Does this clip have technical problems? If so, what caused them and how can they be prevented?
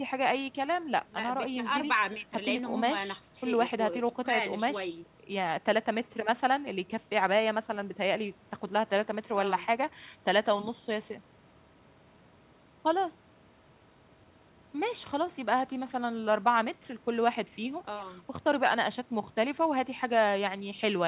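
No, the speech carries no technical faults, and the band-limiting with nothing above 4 kHz is simply the normal sound of a call path, consistent with G.711 mu-law at 64 kbps.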